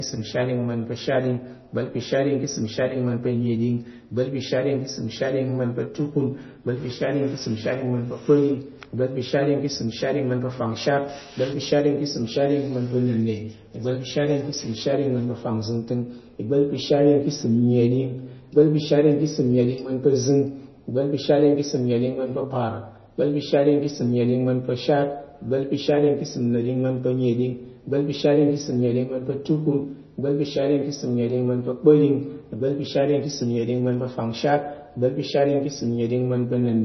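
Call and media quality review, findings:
Whole clip: dull, band-limited speech with nothing above 5.9 kHz, watery, swirling texture and metallic chirps on s sounds, consonant attacks smeared. Likely MP3 compression, heavy codec damage consistent with a low bitrate near 24 kbps. Encoder short of bits cuts treble at a fixed frequency, drops weak spectral lines that flicker on and off between frames, producing the swirl and chirps.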